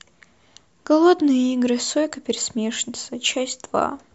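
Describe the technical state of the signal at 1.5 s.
At 1.5 s the speech signal is intact, with no dropout, clipping, distortion or other fault audible.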